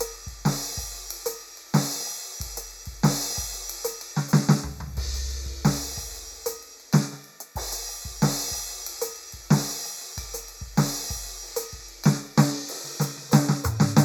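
A piece of music with channel delay (comb filtering) from start to finish. One channel arrives late by a fraction of a millisecond, roughly 0.15 ms, which fits a lag of a handful of samples. When the channels are summed to mono, content common to both cancels at evenly spaced frequencies. The first notch falls near 3 kHz, with further notches higher up. The top end sounds hollow and phasey.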